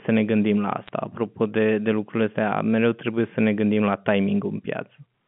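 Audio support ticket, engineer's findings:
Bit errors on a digital phone line, 0.86–0.89 s, right after "ne gândim la": brief crackle of sharp ticks from a low error rate flipping single A-law samples. Isolated spikes in the waveform, thin vertical lines across the spectrogram.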